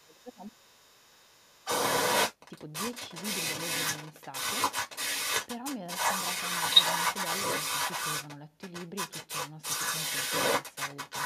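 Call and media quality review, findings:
Speech suppressed in double talk, 0.00–1.69 s: talker's level dips by up to about 20 dB and thins or breaks up for roughly one and a half seconds while the far side also speaks. Likely echo canceller/suppressor attenuating both during overlap.

Other side's voice leaking through, 0.00–8.39 s: a second voice audible alongside the talker, at roughly 10 dB relative to the speech. Likely incomplete echo cancellation of loudspeaker playback reaching the microphone.

Other side's voice leaking through, 8.61–11.25 s: same residual far-end voice resumes after a short gap and runs to the end, again around 10 dB relative to the talker. Same likely residual echo path.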